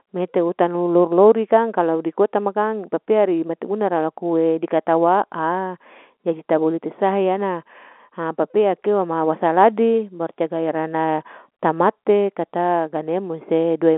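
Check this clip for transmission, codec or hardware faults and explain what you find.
No faults found.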